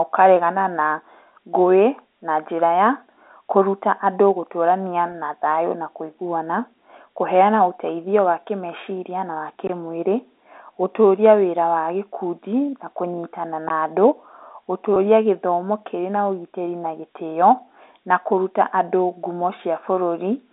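At 5.12 to 5.14 s there is packet loss with pitch repetition. About 20 ms of audio goes missing, which fits a single lost packet. The receiver fills the hole by repeating the last pitch period of the speech. The gap is too short to fade out, so it is heard as a brief held, slightly buzzy tone.

At 9.67 to 9.80 s, just after "wa kĩmeciria na wa", comes a phantom power thump. A supply switched on or off on a live input sends a voltage step through the coupling capacitors. It is heard as a deep low thud. It dies away in about 28 ms.

A second phantom power thump follows at 13.68 to 13.84 s, right after "wa gĩkundi na kũnyitana". It has the same dull, deep knock. This one decays over about 36 ms.

At 14.94 to 14.96 s, packet loss with pitch repetition returns. Again about 20 ms is lost, consistent with one packet. The repeated pitch period bridges it with a short buzzy hold, just before "gĩthomo kĩrĩ na ũgitĩri". 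Both dropouts sit inside the narrow 300 to 3700 Hz telephone band of the G.711 line.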